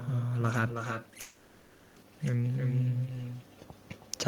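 Right from the start there's echo with no canceller. Every bit of speech comes back roughly a third of a second later as a quieter, thinner copy, about 9 dB below the original. It sounds like the far end has the call on a loudspeaker, their microphone is catching it, and nothing is subtracting it before it's sent back to us. The shadow trails the talker for the whole clip.

Then from 1.21 to 1.98 s there's a call audio freeze. The last sound just hangs and stretches into a fading buzz or hiss for about three quarters of a second, with no drop to silence. After that the speech resumes exactly where it left off, so nothing is lost, but everything afterwards arrives about 750 ms late. That's most likely packets stalling in the network and the jitter buffer running dry, with the receiver filling the gap until they arrive.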